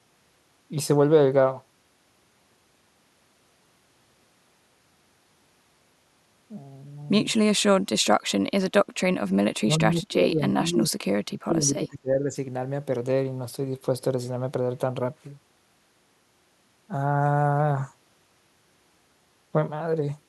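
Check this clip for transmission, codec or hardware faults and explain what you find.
Two stretches of speech suppressed in double talk stand out. The first runs from 9.6 to 11.05 s, the second from 11.25 to 12.35 s. In both, the speech drops sharply, by about 30 dB at worst and then about 25 dB. It sounds dulled and broken up. The likely cause is an echo canceller meeting two talkers at once. It cannot tell the near voice from loudspeaker echo, so it turns everything down.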